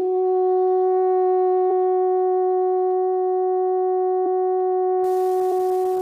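At 1.70 s the music jumps forward by around 70 ms, which fits about three compressed frames skipped, each 23.2 ms long. The decoder never played them, either because they were missing or because it rejected them as damaged. Because adjacent frames overlap, the join is a short smeared blip rather than a hard click, and a chunk of the music is missing rather than just a tick on top. The same happens at 4.25 s, this time a jump of roughly 100 ms, or about four frames.

From 5.04 s to the end, an unreliable data bit adds a continuous crackling fizz. One data line is marginal, so a single bit flips in a random share of samples, and every error produces a spike of the same size. Unlike the frame skips, nothing is lost from the music. The noise sits over it and stays at a steady level, so it carries on through quiet moments instead of tracking the sound.

At 5.51 s, inside that crackling stretch, one more compressed frames skipped event causes another smeared jump of about 70 ms, or roughly three frames.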